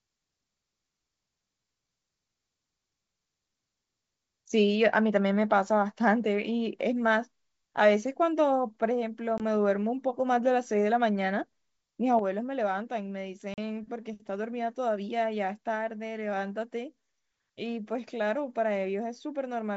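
Packet loss on an ADPCM call breaks this speech recording at 9.38–9.41 s and again at 13.54–13.58 s, with gaps of 20 ms and 40 ms, roughly one and two packets. The missing audio becomes silence with hard edges. Afterwards the decoder's predictor and step size no longer match the sender's, so the speech comes back slightly distorted before it settles. A sudden gain jump at 12.19 s drops the speech and background together by about 6 dB and holds there to the end, likely caused by a digital gain change applied in one step with no ramp. Throughout, the speech has a clear wideband character up to about 7 kHz, consistent with G.722 coding at 64 kbit/s.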